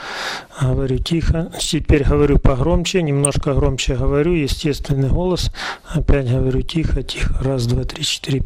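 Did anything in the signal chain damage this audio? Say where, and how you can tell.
Yes. MP2 compression runs throughout the clip. The top end sounds dull and the remaining detail has a gurgling, granular edge, with upper bands seeming to flicker in and out. That points to the codec stage, likely an MPEG Layer II encode at a low rate, something near 80 kbps. With so few bits shared across its 32 sub-bands, the encoder switches off whole high bands and quantises the survivors coarsely.

DAB burbling appears from 3.07 to 3.41 s as a burst of burbling over the programme. This damage happened in transmission. Weak reception, with a bit error rate somewhere around a third of a percent, let corrupted bits past the error correction into a run of 21 MP2 frames. Damaged samples then put short blips of noise into single sub-bands, and damaged scale factors that get through make sub-bands leap in level for up to a frame, producing the burbling.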